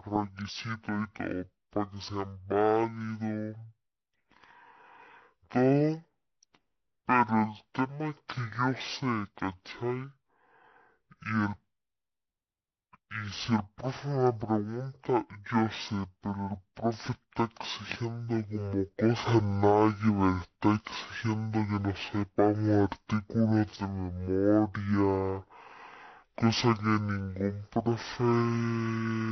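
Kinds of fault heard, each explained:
Stereo read as mono: the file's left and right samples, which alternate in the stream, got treated as one long single channel, so every stereo pair plays back as two consecutive mono samples. That doubles the sample count for the same stretch of audio, and the whole clip runs at 0.5x speed, dropping a full octave, 12 semitones down. You'll hear the speech slowed and deep from start to finish, with no point where it corrects itself.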